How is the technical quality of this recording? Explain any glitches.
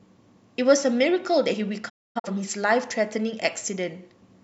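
The speech has one glitch. From 1.88 to 2.29 s, sound fades out in 20 ms into short silent holes, the longest 256 ms. This is a digital broadcast dropout: failed frames were muted, and that audio is gone.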